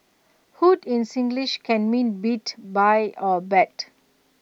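No technical faults detected.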